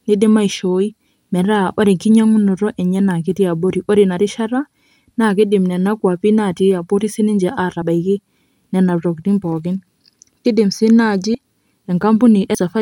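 Speech clip with compressed frames skipped: whole frames, each 26.1 ms long, were lost or rejected by the decoder at 7.81 s (about one frame, roughly 30 ms) and at 11.34 s and 12.54 s (about two frames, roughly 50 ms each). The speech jumps ahead there.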